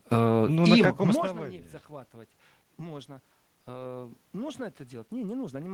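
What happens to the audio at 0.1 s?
Nothing goes wrong at 0.1 s: the speech is intact there, with only the background noise of the room audible beneath it.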